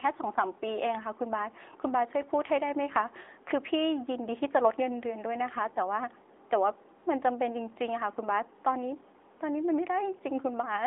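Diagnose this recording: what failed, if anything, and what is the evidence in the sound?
Codec stage: the speech carries an AMR narrowband mobile codec throughout, with nothing above 3.8 kHz and a 300 Hz to 3.6 kHz line band. Unlike a simple telephone band-limit, the clearly buzzy, synthetic vocal-tract-model texture fits AMR-NB at roughly 10.2 kbps.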